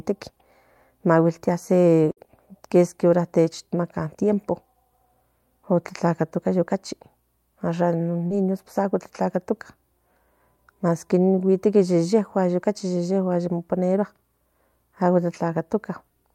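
At 2.11 s, just before "kieski ora techamaca tiempo", a burst of packet loss lasting to 2.19 s removes about 60 ms of speech. The receiver stretches the last received sound for roughly 53 ms, letting it sag in level, and then jumps ahead, so what is heard is a held, fading tail followed by a skip. What sets it apart from a short concealed loss is the audible fade and the clear jump onward.

A short concealed packet loss runs from 8.27 to 8.32 s, right before "amo tlatlatoca". Here about 40 ms is missing, and the decoder fills roughly 35 ms by extrapolating from the preceding sound before blending back into the real signal. The result is a quick smear or wobble. Unlike the burst at 2.11 s, the join is smoothed over rather than leaving a noticeable skip.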